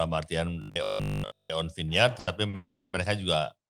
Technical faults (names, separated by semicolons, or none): robotic sound from repeated short buffers; short stall from a late packet; call audio freeze